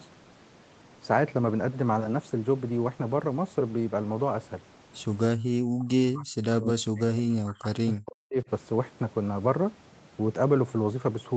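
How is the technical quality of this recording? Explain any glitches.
Quality breaks down once, between 5.65 and 8.50 s. The likely cause is speech suppressed in double talk: the echo canceller, unable to tell this talker from loudspeaker echo while both sides spoke, clamped the microphone signal. The speech drops by as much as roughly 40 dB, affected for about three seconds in all. Nothing above 8 kHz is heard throughout, consistent with the call path.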